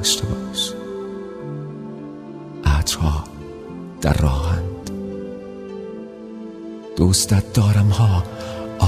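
Nothing stood out on listening to this recording.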